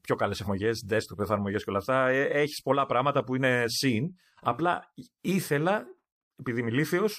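At 0.44 to 0.48 s, just after "πιο καλές", the speech jumps abruptly ahead and resumes at "desktop εφαρμογές και όλα". These are compressed frames skipped: the decoder never played a run of encoded frames, either because they were missing or because it rejected them as damaged. Roughly 150 ms of audio is lost, about three frames of roughly 46 ms each.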